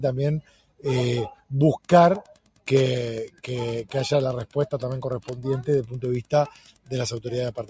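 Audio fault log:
Throughout, noise suppressor applied to music or sounds: a suppressor tuned for speech stayed active and kept classing sustained material as noise. Its gain swings by roughly 15 dB, so attacks pass while held tones and decays are pushed down, leaving the sound pumping and thinned.
0.42–0.85 s, 1.34–1.51 s, 2.22–2.67 s, 3.29–3.44 s and 6.5–6.92 s, sound cut by the noise suppressor: in these stretches the suppressor judged the sound to be noise and clamped it, by about 18 dB at its deepest (about 15 dB at 3.29 s). Each lasts from a fraction of a second to about half a second, and the audio sinks and tails are cut short.
1.78–7.69 s, Wi-Fi interference: a nearby Wi-Fi transmitter's beacon, repeating every 102.4 ms, is being rectified by the audio circuitry. It comes through as a steady ticking about ten times a second, sitting roughly 25 dB below the sound, beneath a band that stops at 8 kHz.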